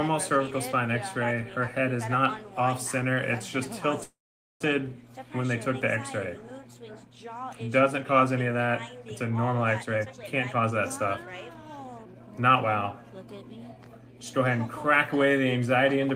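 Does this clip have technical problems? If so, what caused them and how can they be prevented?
Yes, there are two. From 4.03 to 4.62 s there's a call audio freeze: the sound stalls, trails off as a short fading buzz, then drops to near silence for about half a second before resuming right where it left off. That's likely packets held up in transit until the jitter buffer ran dry. Nothing gets lost, but roughly 0.57 s of delay is added. A larger or adaptive jitter buffer, plus steadier network routing or QoS, would help prevent it.

Then from 9.82 to 12.42 s you get a jitter buffer speed-up. The audio runs at about 122% speed with the pitch unchanged, so it sounds rushed. The receiver is trimming tiny pitch-period chunks over and over, about half a second in total, to cut down the extra audio held in the buffer. Smoother delivery and gentler catch-up settings in the buffer would keep this from happening.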